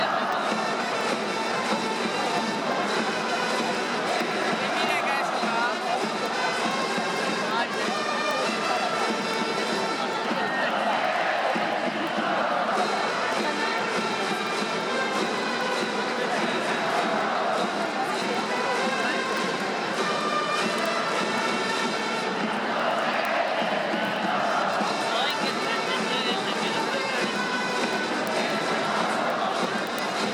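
Word clock ticks, 0.21 s to 30.33 s: an unlocked receiver clock, roughly 200 ppm off, slips one sample about ten times a second, producing sharp, regular ticks.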